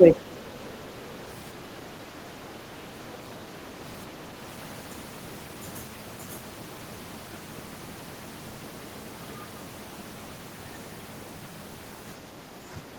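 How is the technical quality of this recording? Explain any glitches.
Two brief dips in level mark the recording. Speech suppressed in double talk appears from 0.00 to 0.26 s and again from 1.63 to 1.71 s. The speech drops by roughly 10 dB, likely because an echo canceller could not separate the talker from the loudspeaker echo while both sides spoke, and turned both down. On a waveform, the envelope visibly shrinks; a spectrogram shows fainter bands.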